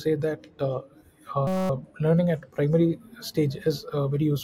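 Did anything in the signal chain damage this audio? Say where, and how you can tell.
Yes, a system hang loop at the driver or buffer stage, from 1.47 to 1.70 s, just before "learning at primary stage". The speech freezes into a steady 188 Hz buzz as one 5.33 ms slice repeats exactly, which fits a 256-sample ring buffer replaying while the system stalled.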